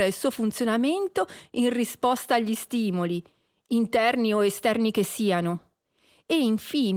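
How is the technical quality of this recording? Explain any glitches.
No glitches to report: the speech comes through Opus voice compression in hybrid fullband mode at 24 kbps, carrying only the light coding texture expected at that rate.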